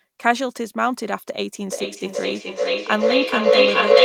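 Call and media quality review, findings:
Feedback howl, 1.70 s to end of clip: mic-to-speaker loop gaining level each pass, two devices sharing a room. Narrows to a tone around 500 Hz, pulsing about every 400 ms, peaking about 10 dB over speech.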